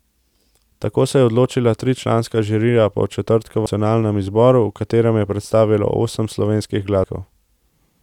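At 3.66 s and again at 7.04 s the speech is interrupted by a CD skip. Each time the pickup laser lost its track and landed on a different turn of the disc's spiral, so the player muted for a few milliseconds and resumed elsewhere in the recording. Both are heard as a brief tick followed by an abrupt discontinuity, with the speech jumping by a whole number of disc revolutions rather than continuing smoothly.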